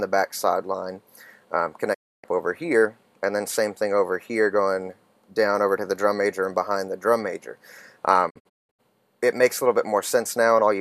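A digital broadcast dropout occurs twice: the receiver lost valid frames and muted until clean data returned. At 1.93 s the sound fades out over 20 ms and stays silent until 2.25 s. From 8.29 to 8.81 s it breaks into several short holes, the longest 192 ms, and whatever played in those gaps is gone.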